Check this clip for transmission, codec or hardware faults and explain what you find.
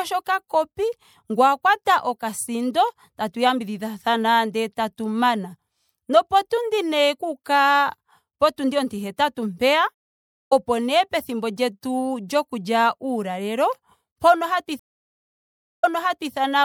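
Two stream reconnects disrupt this speech. At 9.94 to 10.53 s the connection dropped and a fresh decoder started mid-stream. After about 0.57 s of silence, the speech resumes roughly half a second further on, at "nee pethimbo lyetu", with material skipped. At 14.79 to 16.33 s the same break leaves about 1.04 s of silence, then the server's resent burst restarts the audio 0.50 s earlier, repeating a moment of speech.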